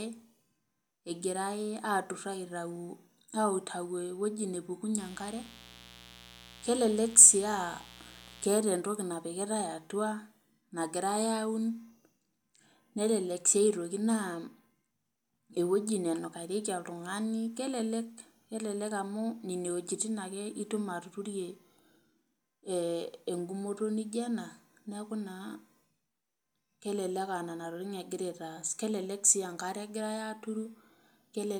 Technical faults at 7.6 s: mains buzz

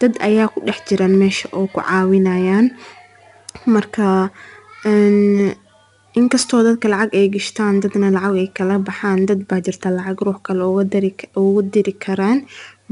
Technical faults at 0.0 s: 4-bit ADPCM compression

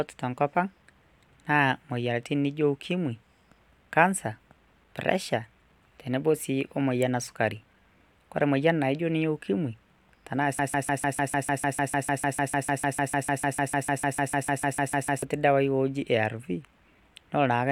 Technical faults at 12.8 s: broken-record loop

